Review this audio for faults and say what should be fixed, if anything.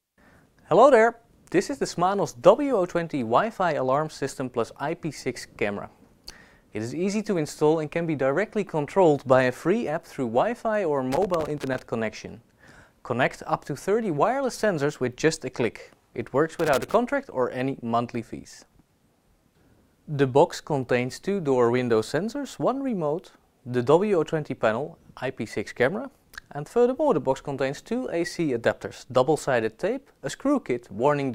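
Loose connector crackle appears twice, from 11.12 to 11.79 s and from 16.59 to 16.94 s, as irregular bursts of scratching. A worn or dirty contact is making and breaking as it moves, chopping the signal on and off, and any DC on the line turns each break into a pop. The ragged, uneven spacing is what separates it from digital clicks or buffer dropouts, which repeat at steadier intervals and sound cleaner-edged. To prevent it, clean or replace the suspect plug and socket and secure the cable so it cannot flex at the joint.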